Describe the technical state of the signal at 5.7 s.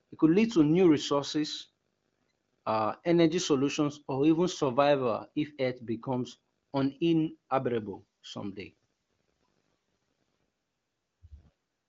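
At 5.7 s the speech is intact, with no fault, and its band stops at about 7.6 kHz as expected of a wideband (HD Voice) AMR-WB path running at a high rate.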